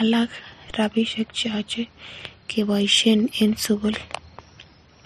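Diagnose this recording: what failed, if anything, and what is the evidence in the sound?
A DC step at 0.70 s, converter or analogue input: a low thump as the waveform's zero line jumps, then decays back through a 20 Hz high-pass.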